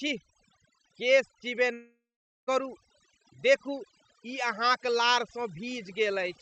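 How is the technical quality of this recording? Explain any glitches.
Technical quality is poor, with two problems. Overdone noise removal runs through the whole clip. A long network dropout hits near the start.

The overdone noise removal is constant. The denoiser was set too hard. It pushes individual frequency bands down whenever they sit near its noise estimate. Soft parts of the voice vanish too. Pauses become near-silent with faint twinkling specks.

The gap runs from 1.73 to 2.49 s, about three quarters of a second. It sounds like a long network dropout is the likely cause. The last sound is stretched into a fading buzz or hiss. Then roughly half a second of silence follows. The speech resumes with that stretch missing. The call-codec path caps the top end at 8 kHz.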